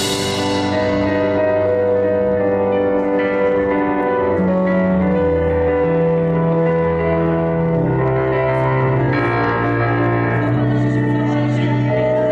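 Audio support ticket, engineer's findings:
No technical faults detected; the signal path shows nothing that calls for further investigation.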